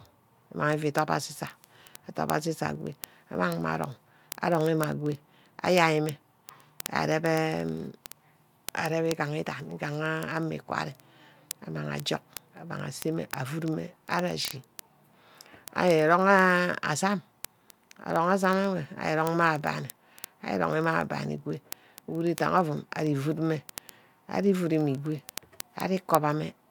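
A digital link is being read by a receiver running on its own clock rather than locked to the sender's, and the two clocks differ by something on the order of 700 ppm. Each time they slip past each other a single sample is dropped or repeated, producing word clock ticks from 0.1 s to 26.69 s: sharp clicks of uneven strength recurring roughly every 30 ms, around a thousand in all, laid over the speech throughout.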